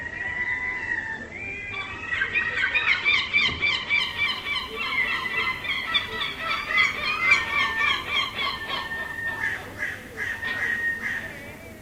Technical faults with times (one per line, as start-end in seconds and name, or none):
0.00-4.00 adaptive stream starting at a low bitrate